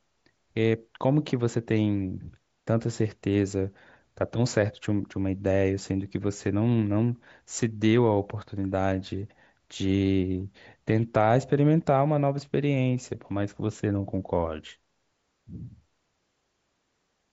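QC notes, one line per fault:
No faults heard anywhere in the speech.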